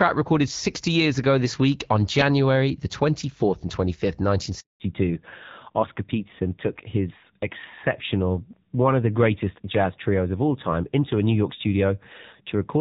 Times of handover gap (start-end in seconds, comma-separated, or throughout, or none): 4.60-4.80